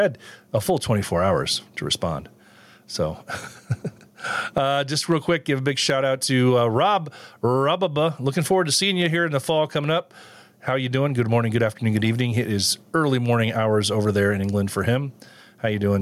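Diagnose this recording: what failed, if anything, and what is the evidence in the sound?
Gain pumping throughout, likely from microphone input gain set far too high and a fast limiter in the processing pulling it back on each loud syllable. The gain swings by around 10 dB, leaving the speech squashed.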